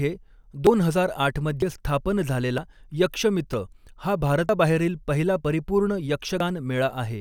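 Short skips cut into the speech at 0.67, 1.62, 2.58, 3.54, 4.49, 5.45 and 6.40 s, each dropping a few tens of milliseconds. This is likely audio missing between chunks, with roughly one-second chunks joined seamlessly.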